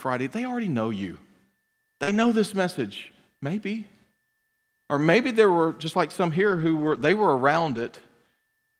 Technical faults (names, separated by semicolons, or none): short concealed packet loss; lost packet rebuilt from error correction